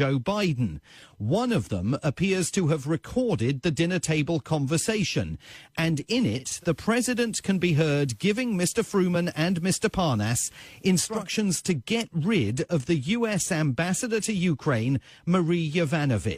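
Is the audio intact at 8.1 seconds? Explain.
No. At 8.1 seconds the sound sits inside a digital radio blend to analogue, running from 6.36 to 11.31 s. The receiver lost its digital stream and cross-faded over 291 ms to the station's FM broadcast, returning the same way at the end. On the FM side a hiss floor comes up, roughly 40 dB below the signal, and the level shifts by about 1 dB, so the moment asked about carries that hiss.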